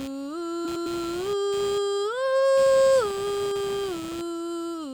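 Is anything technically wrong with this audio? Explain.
Yes, two things. Computer activity noise runs the whole way through: the machine's load swings are leaking into the audio ground, giving a buzzy, scratchy pulsing around 150 Hz, roughly 20 dB under the music. Then there's a stretch of frames out of order from 0.65 to 0.86 s, where two neighbouring blocks of about 105 ms each play swapped, which fits runs of four frames. The music jumps into a garbled flutter, but no time is lost.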